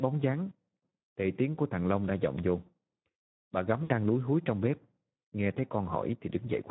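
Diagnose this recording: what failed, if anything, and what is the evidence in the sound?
The speech sounds hoarse and noisy from start to finish, with a rough grain. That fits the Speex codec at about 11 kbps, a codec-stage fault where the CELP excitation has too few bits to model the voice cleanly.

From 0.89 to 1.13 s, and again from 3.83 to 3.92 s, the voice is stretched out and fades before recovering weakly. This is VoIP packet loss concealed by the speech codec, a network-stage fault. The decoder extrapolated from its last pitch and filter while lowering the gain. The first gap covers about 200 ms with a longest run near 180 ms, which fits about ten 20 ms frames. The second covers about 60 ms.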